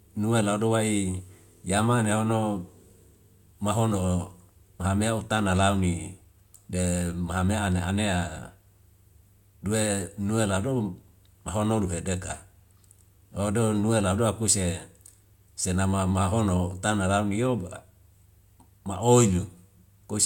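Nothing stood out as a technical problem on listening to the speech in this recording.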